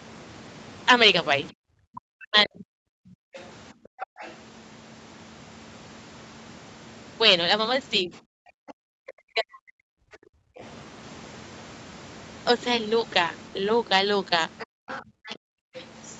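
It's speech over a call line, band-limited to about 8 kHz by the call path, and it has three echo-canceller problems. Speech suppressed in double talk hits from 1.59 to 3.33 s and again from 8.02 to 10.07 s. The talker dips by something like 40 dB, chopping out roughly a second and a half each time, likely because the canceller ducked everything while both ends were talking. The other side's voice leaking through shows up at 3.35 to 4.36 s, 8.69 to 10.63 s and 14.59 to 15.37 s, sitting about 20 to 30 dB under the talker. That's likely leftover loudspeaker echo the canceller didn't fully scrub from the mic. Then there's background gated by the echo canceller: the room tone drops out at 3.73 to 4.18 s (about 38 dB down), 10.35 to 10.58 s (about 31 dB) and 14.66 to 15.74 s (about 39 dB), as the canceller clamps the mic hard while the loudspeaker is playing and lets go once it stops.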